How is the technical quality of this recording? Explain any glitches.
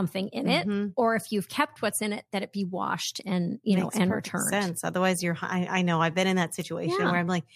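The speech is marred by one persistent fault across the whole recording.

Sample clock jitter, throughout: the converter's timing wanders by roughly a microsecond or two, so each sample lands slightly off its proper instant. Steep, fast-changing parts of the waveform suffer most, producing a grainy hiss about 35 dB below the signal that thickens on loud, bright sounds and drops away in pauses.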